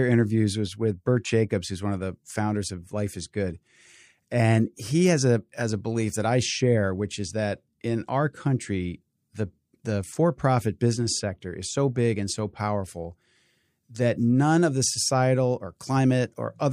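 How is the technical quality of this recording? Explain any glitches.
No technical glitches can be heard in this speech recording. There is nothing in it that calls for explanation.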